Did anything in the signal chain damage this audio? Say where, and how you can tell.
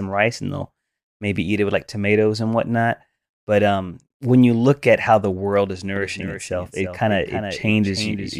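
Yes. A second capture path or a misaligned edit has likely mixed the speech in twice: from 5.96 s to the end there is a doubled audio track, a full-band copy trailing roughly 300 ms behind at about 10 dB lower. It starts abruptly and carries no decay or room colour.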